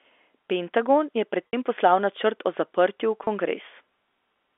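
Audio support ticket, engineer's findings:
Packet loss with pitch repetition, 1.49 to 1.53 s, after "je pred": brief held, buzzy tone, gap fits two 30 ms packets lost. Again at 3.24 to 3.27 s, after "načrt o zaprtju v": one packet's worth. Receiver concealment repeating last pitch period. G.711 telephone band audible.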